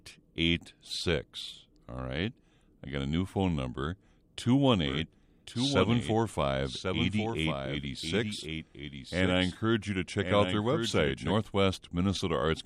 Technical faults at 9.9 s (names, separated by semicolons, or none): doubled audio track